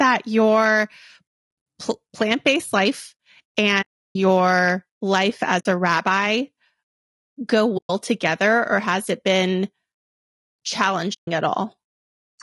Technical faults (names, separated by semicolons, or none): low-delay AAC compression; AAC frame loss with muting